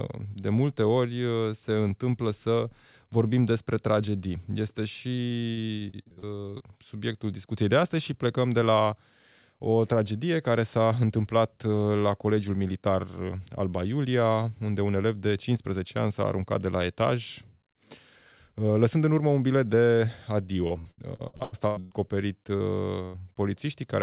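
From 5.15 to 6.63 s the speech turns choppy and robotic: repeated packet loss, with about fifteen short holes (the longest 59 ms) each patched by stretching the previous sound, so roughly a third of the stretch is filler. Unlike a single dropout, the gaps come in quick succession and give a stutter.

Right after "urmă un bilet de", from 20.67 to 21.94 s, the same repeated packet loss returns more heavily. Nine gaps, one as long as 114 ms, leave nearly half the span concealed, so pieces of speech are missing.

At 22.57 to 22.63 s a short concealed packet loss leaves about 30 ms of audio lost and filled in from the preceding sound. This is heard as a brief smear or wobble, far too short for the stuttering pattern of the earlier stretches.

From 23.05 to 23.17 s a burst of packet loss removes about 90 ms in one go. The receiver holds the last sound and fades it, giving a sustained buzz or hiss before the speech resumes further on. 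That single held tone distinguishes it from the scattered chop of repeated loss.

Throughout, the call path passes nothing above 4 kHz, which fits a narrowband codec such as G.711.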